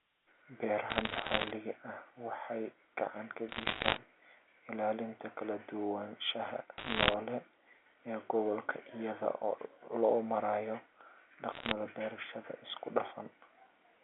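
Bit errors on a digital phone line crackle through the sound at 0.90 to 1.51 s, 3.49 to 3.98 s, 6.78 to 7.14 s and 11.52 to 11.72 s. Flipped bits corrupt single samples, roughly 1.5 bits in a hundred in the first three bursts and one in a hundred in the last. Sign or high-bit hits give sharp ticks over the narrowband telephone audio.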